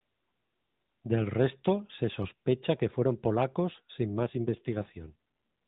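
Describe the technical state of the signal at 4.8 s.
An AMR rate drop covers this moment, running from about 4.20 s to 5.15 s. A weakening radio link pushed the mobile codec to fewer bits for the voice, handing the spare capacity to error protection. The sound stays within the same 4 kHz narrowband ceiling with no gap, but the speech turns coarser and more buzzy and synthetic, which fits a step down from 12.2 kbps to about 5.9 kbps until the rate recovers.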